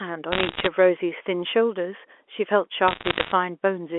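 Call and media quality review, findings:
Bit errors on digital phone line, 0.32–0.67 s: flipped bits in the G.711 mu-law stream, each one corrupting a single sample. Sign-bit and high-bit hits give sharp ticks, clustering into crackle laid over unchanged speech. Error rate roughly one and a half percent.

Bit errors on digital phone line, 2.88–3.32 s: same line fault recurring at roughly one percent, so the crackle is sparser. Isolated sample spikes ride on the narrowband 0.3–3.4 kHz telephone sound.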